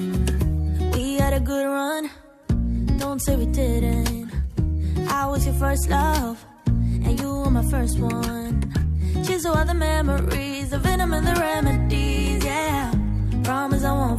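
No technical faults detected.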